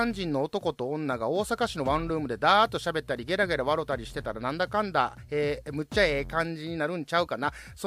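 From 1.55 s to 5.65 s, mains hum sits under the speech. It is a steady low tone at 60 Hz, roughly 25 dB below the voice. The power line is coupling into the signal, likely through a ground loop or a nearby transformer.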